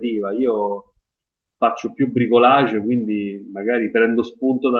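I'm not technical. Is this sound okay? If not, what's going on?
Yes, this speech sounds fine, and nothing is wrong with it beyond the ordinary sound of audio sent over an internet call.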